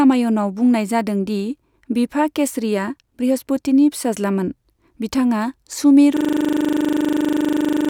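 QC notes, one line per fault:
6.17 s to end, system hang loop: a single 40 ms slice of speech repeats 43 times as the buffer keeps cycling after the system froze, giving a steady 25 Hz buzz. The waveform shows identical repeating blocks, and the spectrogram shows frozen vertical stripes with harmonics spaced 25 Hz apart.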